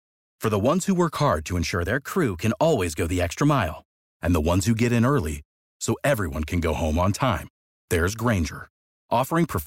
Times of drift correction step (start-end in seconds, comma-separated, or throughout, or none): 1.72-3.93